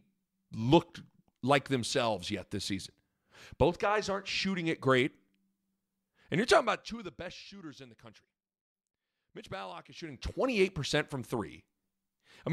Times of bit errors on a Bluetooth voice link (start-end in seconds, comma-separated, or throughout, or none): none